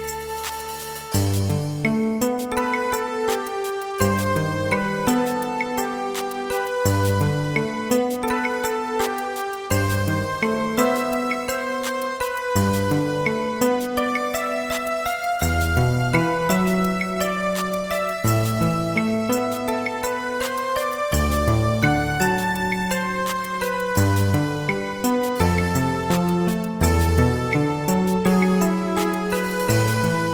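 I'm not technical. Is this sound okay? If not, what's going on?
Yes, no faults can be heard.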